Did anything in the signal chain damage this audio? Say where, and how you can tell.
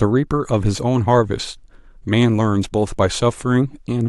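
No, nothing in this speech recording stood out on listening as damage from any stage of the signal chain.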